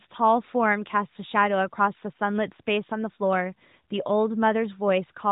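No technical faults are present in the speech, which carries the light, band-limited character of the AMR narrowband mobile codec at 12.2 kbps, with nothing passing above about 3.8 kHz.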